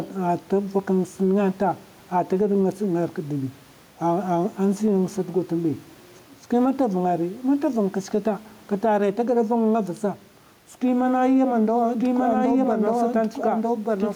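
Gain pumping runs through the whole recording. The level swings by about 5 dB. The room noise sits about 36 dB below the speech. The likely cause is gain set too high, with a fast limiter pulling it back.

From 12.00 s to the end, a doubled audio track appears. A second copy of the speech trails roughly one second behind, at about the same level. It is dry and full-band, and it cuts in abruptly. A slower second capture path is the likely cause.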